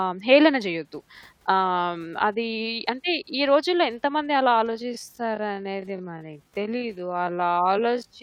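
From 4.67 s, a time-stretched section abruptly slows pace to 0.535x while pitch holds, so the speech drags, likely from software repeating short segments.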